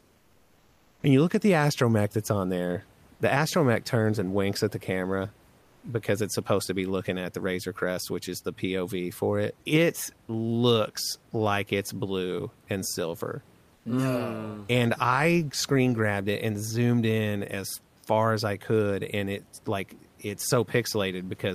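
From 0.00 to 1.03 s, 5.61 to 5.83 s and 13.75 to 13.85 s, comfort noise replaces the background. The room noise turns flat and featureless, about 4, 1 and 4 dB quieter, likely because discontinuous transmission pauses sending and the receiver synthesises filler noise.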